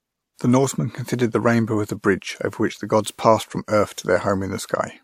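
Transcoding between lossy codecs runs throughout the speech, with nothing above 16.5 kHz and two layers of coding artefacts heard together. The likely cause is a lower-bitrate MP3 pass re-encoded as WMA, the second codec spending bits on the first one's smearing while adding its own.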